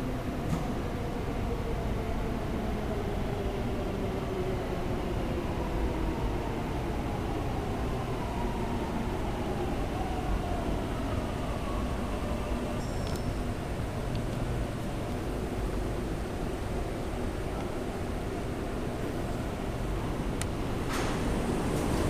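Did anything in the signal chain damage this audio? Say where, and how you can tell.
No, nothing in the chain from capture to playback has left an audible mark on these sounds.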